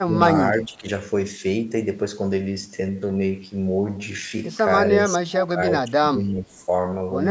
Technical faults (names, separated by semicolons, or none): speech suppressed in double talk